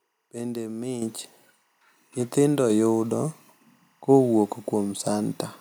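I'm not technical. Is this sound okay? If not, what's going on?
No. Throughout the recording there is timecode bleed: a faint, busy chirping behind the speech, flicking rapidly between two high tones, one roughly twice the pitch of the other. It comes from a 24-frames-per-second sync signal leaking in from a nearby cable or track. Unlike a steady hum or whistle, it warbles constantly.

At 1.02 s there is a microphone volume stepped up fault: the calling software suddenly turned the microphone's input up in one go. You can tell it isn't the speaker getting louder because the background noise jumps up at exactly the same instant.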